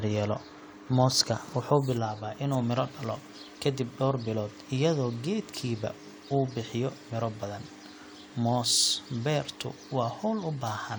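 No technical faults are audible.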